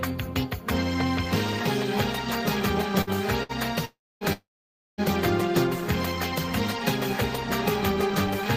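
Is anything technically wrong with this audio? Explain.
Yes. The clip has two bursts of packet loss and two long network dropouts, all clustered between 3.0 and 5.0 s.

Burst of packet loss at 3.01–3.10 s and 3.43–3.52 s: each time roughly 60 ms of audio failed to arrive in time. The receiver concealed the gap by extending the last received sound and fading it down, so each is heard as a short held buzz or fading hiss before the audio jumps ahead, with that stretch skipped.

Long network dropouts at 3.85–4.24 s and 4.33–5.01 s: the sound is first extended briefly and fades, then goes quiet, about 240 ms of near-silence in the first and about 530 ms in the second. Playback resumes further on, with roughly 360 ms and 660 ms of material gone. The likely cause is a stall in packet delivery lasting longer than concealment can cover, after which the receiver stops synthesising and outputs silence until data returns.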